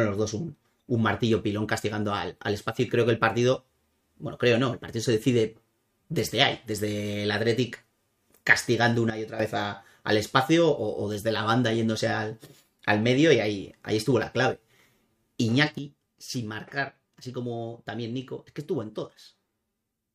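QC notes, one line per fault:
9.10–9.40 s and 15.78 s to the end, sudden gain jump: level drops abruptly by about 10 dB for roughly 0.3 s, then by about 8 dB from 15.78 s onward, sound and background noise falling together, likely a digital gain change applied instantly without a ramp.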